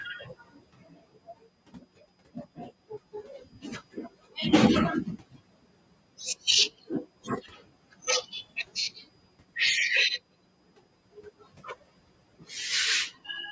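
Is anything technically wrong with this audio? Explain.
Yes. Speech cut by the noise suppressor occurs at 0.24–1.45 s, 2.34–2.7 s, 3.13–3.64 s and 7.44–7.64 s. The suppressor mistook parts of the speech for background and pulled them down, by up to about 18 dB, so soft consonants and endings sound swallowed. Unlike a dropout, the sound fades rather than cutting to silence.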